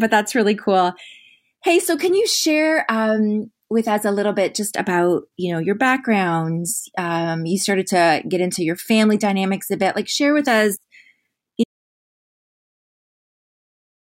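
Losing the input signal, most likely through a disconnected device, a failed link or a mute, left the recorder writing nothing but silence from 11.64 s onward. This is an audio dropout to silence that never recovers: the speech cuts off abruptly mid-flow and the last 2.4 s, through to the end, are dead silence, with no room tone or background underneath. Whatever was spoken during that stretch is lost entirely.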